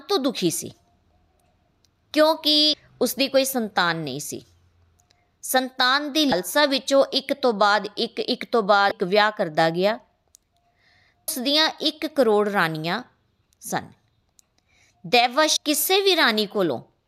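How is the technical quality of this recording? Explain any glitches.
The recording has five brief glitches caused by damaged data in a compressed stream. They occur at 2.74 s, 6.29 to 6.32 s, 8.88 to 8.92 s, 11.28 s and 15.54 to 15.57 s. The ones at 2.74 and 11.28 s last only about 4 ms. The other three last under 40 ms. At each point, corrupted bytes confuse the decoder. It misreads the frame and loses sync, then recovers at the next clean frame header.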